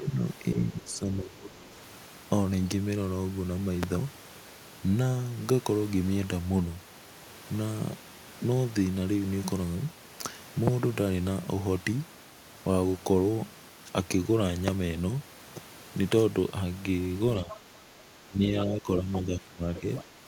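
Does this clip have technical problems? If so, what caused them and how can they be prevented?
Yes. The speech is suppressed in double talk from 0.00 to 0.21 s, from 0.54 to 1.71 s, and again from 17.42 to 20.16 s. The level sinks, by around 10 dB at the start, about 20 dB in the second stretch and about 15 dB near the end, and parts of the talker's sound drop away. The likely cause is an echo canceller that heard both sides at once, could not split the local voice from the loudspeaker echo, and attenuated everything. Unlike a network dropout, the dips track the far side's activity. Using a canceller with better double-talk detection, or a headset, prevents it.

The other side's voice leaks through at 0.88–0.94 s, very faint at about 30 dB below the speech, and more clearly at 17.49–17.59 s and 19.75–20.04 s, at about 15 dB down. This is likely residual echo that the canceller failed to remove from the microphone feed. 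What sets it apart from background chatter is that it comes in fragments landing inside the suppressed stretches. Headphones or a better-tuned echo canceller stop it.

A single loud pop sits at 3.83–3.85 s, peaking roughly 15 dB above the speech, with the talker's sound continuing underneath. It is likely a voltage step from a connector, switch, static discharge or driver glitch. Unlike a dropout or a clipped peak, nothing is lost: it is a brief added thump lasting only about 26 ms. Secure cables, grounding and stable drivers prevent it.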